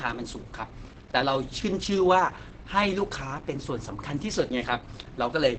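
Speech, muffled and hoarse throughout with nothing above 8.8 kHz, likely from Opus compression in its low-bitrate speech mode; it sounds hoarse rather than swirling as MP3 would.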